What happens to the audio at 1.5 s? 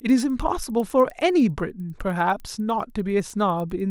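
Resampler restarted on every block: at 1.5 s the speech carries one of a steady run of ticks present through the whole clip, with 1.5 s falling right on a block boundary. The upsampling, consistent with a 24 kHz to 48 kHz conversion, was done in separate 100 ms blocks, so at each edge the converter lacked the true neighbouring samples and left a small error. The result is a tick every 0.1 s, a 10 Hz pattern heard whenever speech is present.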